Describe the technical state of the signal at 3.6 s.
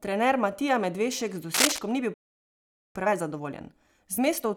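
At 3.6 s you're inside a time-compressed catch-up that kicks in right after "ni bil" at 2.95 s and runs to the end. The player is working off a backlog by snipping out tiny slices and cross-fading them, so speech moves about 1.15 times fast at normal pitch.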